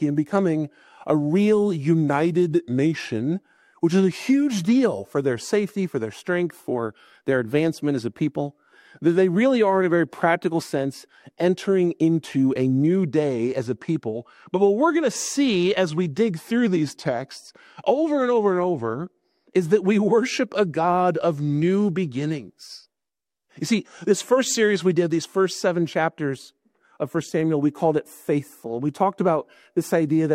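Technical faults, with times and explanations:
2.11–3.20 s and 16.67–17.26 s, drift correction step: playback slows about 6% and drops roughly a semitone flat, then snaps back, likely a clock-matching rate jump.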